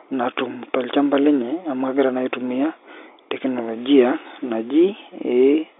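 Nothing goes wrong anywhere in this stretch of speech, which simply comes through the narrow band of an ordinary telephone line with nothing to flag along the way.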